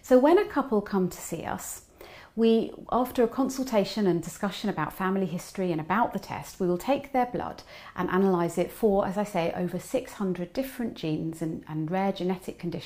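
Listening closely, nothing in the audio stood out as a technical problem.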